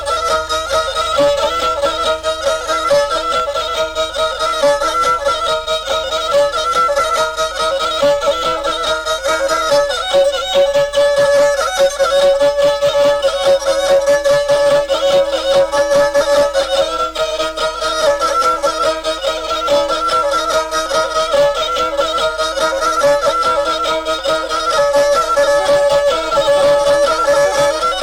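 Hard clipping runs through the whole audio. Peaks are driven about 4 dB past what the signal path can pass, so a small fraction of samples are cut flat, adding brief crackle on loud moments rather than the smooth, continuous thickening of soft saturation.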